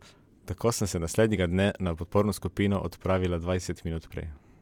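A listener hears a short speech recording with no audible technical fault anywhere in the signal.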